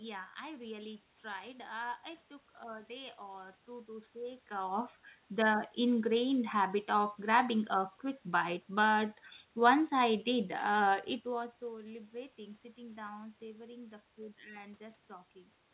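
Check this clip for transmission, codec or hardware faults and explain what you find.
I found no transmission, codec or hardware faults in this clip.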